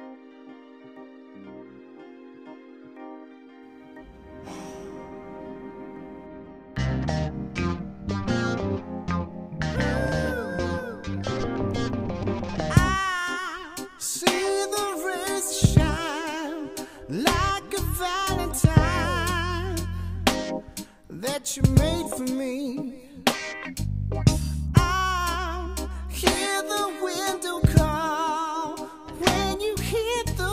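No technical faults can be heard anywhere in this clip. Nothing in the recording or playback chain intrudes on the sound at any point.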